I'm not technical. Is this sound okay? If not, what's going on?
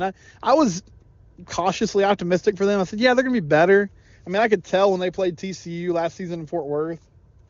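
Yes, this speech is fine, and the HD Voice phone connection it came through is doing its job without any trouble you'd notice.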